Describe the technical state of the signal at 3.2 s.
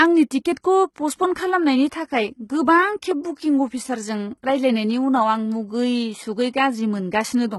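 At 3.24 s a transform codec has spread quantisation noise across a block whose sharp attack sits late, so pre-echo appears. The noise budget set by the loud onset also fills the quiet stretch before it, leaving a short hiss about 11 ms ahead of the attack. That brief smear blunts the onset of the speech, which sounds softened rather than crisp, with a small breathy lead-in where it should be quiet.

Underneath this moment, and across the whole clip, the speech is likely coded with HE-AAC at a low rate, heavy enough to fit roughly 16 kbps. Only the lower spectrum is coded directly. The treble is rebuilt by copying lower bands upward under a coarse envelope, and nothing reaches above 11.8 kHz. The upper range is synthetic: its harmonics don't line up across the crossover, so sibilants sound gritty, metallic or lispy.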